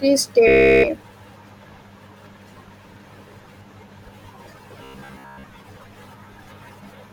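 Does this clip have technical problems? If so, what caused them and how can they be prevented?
Yes. Robotic sound from repeated short buffers at 0.48 to 0.90 s and 4.84 to 5.44 s: a roughly 15 ms chunk, likely replayed while fresh audio arrived late, imposes a rigid 66.8 Hz buzz, covering the whole first stretch and most of the second. A larger jitter buffer and steadier network or CPU delivery would prevent it.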